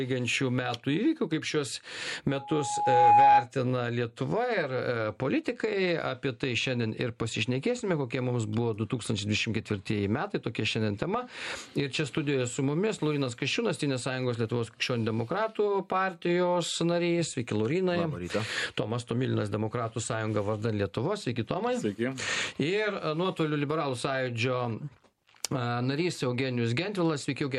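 Loudspeaker feedback squeal runs from 2.29 to 3.47 s: a microphone re-amplifies its own speaker output, and an 831 Hz tone swells over roughly 0.7 s to about 10 dB above the sound. A spectrogram shows one bright horizontal line, and the waveform's envelope balloons.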